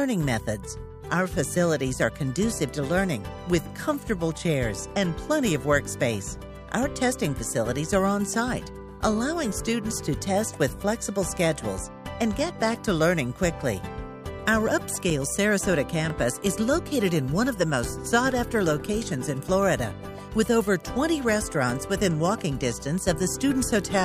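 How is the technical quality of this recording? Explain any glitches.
No glitches can be heard anywhere in the recording. There is nothing here that needs explaining.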